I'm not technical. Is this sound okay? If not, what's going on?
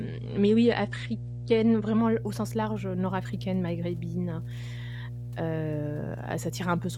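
No. Two things are wrong with this speech clip.

First, there is mains hum from start to finish: a steady, low droning tone at 60 Hz, fairly loud against the speech. It happens when electricity from the power line leaks into the recording, often through a ground loop or a nearby transformer. Unlike a rough electrical buzz, this tone is smooth and deep, and its pitch and loudness never change.

Second, this is an adaptive stream starting at a low bitrate. From the very beginning until about 2.0 s, the sound is dull and smeary, with nothing above roughly 9.7 kHz. The player began with a lower-quality version so playback could start quickly. Once it had checked the connection, it switched to a better one. Unlike a dropout, there is no silence or skip at 2.0 s. The speech simply becomes clearer and brighter all at once.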